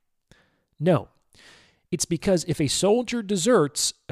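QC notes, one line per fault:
2.89–4.11 s, drift correction step: right after "because if a" the speech drops about 6.2% in speed and about 111 cents in pitch, a little over a semitone, and stays there to the end of the clip. Speed and pitch fall together in a single step rather than gliding, so the voice sounds abruptly slowed and detuned. This is likely a clock-matching stage that changed its playback rate in one jump to refill or drain its buffer.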